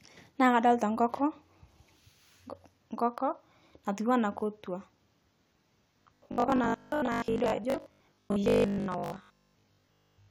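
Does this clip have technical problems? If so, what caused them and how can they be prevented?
Yes. From 6.02 s to 10.3 s, the speech turns robotic, likely from repeated short buffers. A rigid, metallic 50 Hz buzz is heard, which fits a 20 ms buffer replayed while most real audio was skipped. A larger jitter buffer or steadier audio delivery prevents this.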